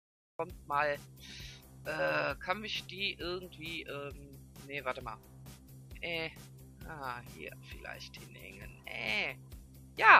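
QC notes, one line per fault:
0.00–0.39 s cut-off start: digital silence, then sound begins abruptly mid-event at 0.39 s with no attack or fade, because capture began late.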